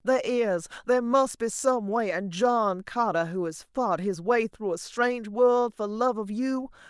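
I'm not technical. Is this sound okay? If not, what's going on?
Yes, this recording is fine and nothing is going wrong in it. The speech comes through steadily, with no breaks, glitches or odd sounds to worry about.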